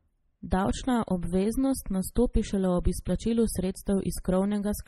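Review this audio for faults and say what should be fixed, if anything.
MP3 compression throughout: the speech sounds watery and swirly with smeared edges, and nothing survives above 16.6 kHz. This is likely MP3 starved of bits, which fits a very low rate near 32 kbps. To prevent it, encode at a much higher bitrate or keep a lossless master.

Pre-echo at 2.15 s: a short hiss of about 13 ms runs ahead of a sharp onset, because the codec spread that block's quantisation noise into the quiet moment before the attack. To prevent it, use a higher bitrate or an encoder with proper short-block switching for transients.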